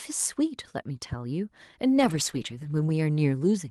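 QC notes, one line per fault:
1.89–2.99 s: call bitrate drop. The speech turns rough and watery for about a second, which fits the encoder falling from 32 to 12 kbps.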